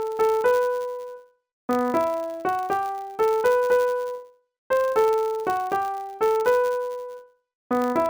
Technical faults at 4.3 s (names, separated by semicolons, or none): filter restarted on every block